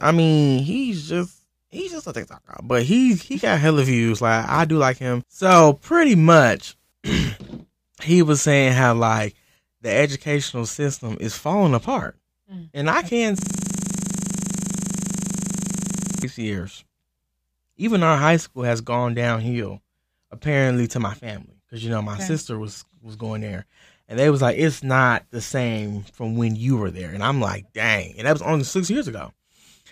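Right after "mm and I can", at 13.39 s, the speech locks into a system hang loop until 16.24 s. Something froze upstream while the sound hardware kept replaying the same 40 ms chunk of its ring buffer, over and over. With a loop that short, the repeats fuse into a steady buzz at 25 Hz instead of a stutter, and it runs for nearly three seconds before normal audio picks up again.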